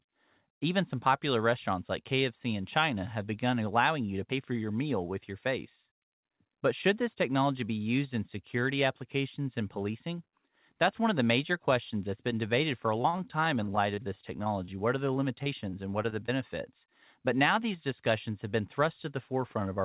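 Speech heard through a narrowband call path, with nothing above 4 kHz, which points to G.711 mu-law at 64 kbps. From 13.02 to 14.70 s and again from 15.14 to 16.30 s the voice turns choppy and robotic, breaking into a rapid run of short holes up to about 38 ms and 29 ms long. This is repeated packet loss: audio packets kept going missing, and each hole was patched by stretching the preceding sound, about 11 to 12 percent of each stretch.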